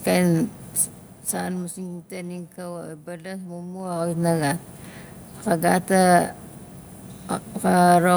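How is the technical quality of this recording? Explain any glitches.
There is one glitch: zipper noise. From 3.77 to 4.30 s, the level changes by roughly 15 dB in 2 dB steps, about twenty a second, with no smoothing, so each jump clicks and the speech takes on a quick ticking buzz.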